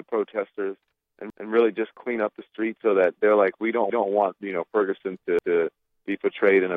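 At 1.30 to 1.49 s and again at 5.39 to 5.57 s, a repeated buffer occurs. New audio arrived late, so the last block played once more. Each repeat lasts about 186 ms, which fits an 8192-sample buffer. It sounds like a brief stutter with a hard join. Nothing seems skipped.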